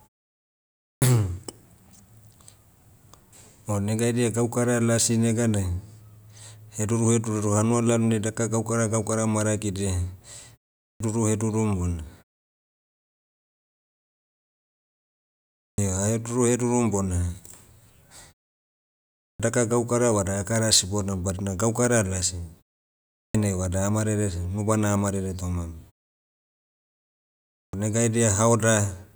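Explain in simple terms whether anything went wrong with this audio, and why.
The playback device dozed off during silences and took about a fifth of a second to wake, so each restart of speech was clipped: a clipped start after a pause at 0.83, 10.83 (before "hedurum bona"), 15.6, 19.19 (before "daka gaukara"), 23.16 and 27.55 seconds. Words jump in abruptly, missing their opening sounds.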